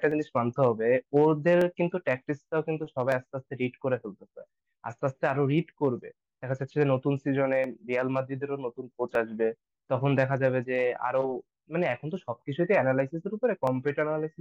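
From 0.12 s to 13.67 s a click or pop recurs every 1.51 s, about ten in all. These are clock drift buffer slips, likely two device clocks differing by around 200 ppm, so about 15 samples get dropped or repeated each time.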